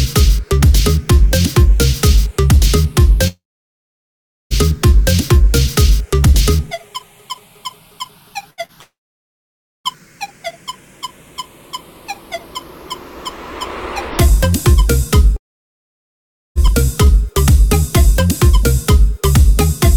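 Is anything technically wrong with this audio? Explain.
Yes. The audio has three gaps where it cuts out for about a second, plus two briefer glitches.

Long network dropouts occur from 3.27 to 4.53 s, from 8.81 to 9.87 s, and from 15.36 to 16.58 s. The lost stretches are about 1.24 s, 1.04 s and 1.2 s. Each time, the last sound carries on briefly and fades. Then there is roughly a second of silence: about 1.11 s, 0.92 s and 1.17 s. The likely cause is audio failing to arrive over the network for that whole stretch. The receiver can only extend what it last heard, and after that it has nothing to play. When the audio returns, it picks up later, and the missing part is gone.

A burst of packet loss comes at 8.50 to 8.60 s, with about 80 ms missing. The receiver extends the last sound and turns it down across the gap. You hear a held, fading tone or hiss. The audio then jumps ahead, skipping what was lost.

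A short concealed packet loss follows at 8.65 to 8.72 s, with about 40 ms missing. The decoder patches the hole by continuing the previous sound and blending back in. It is heard as a brief smear or wobble. These two glitches come just before the second long dropout.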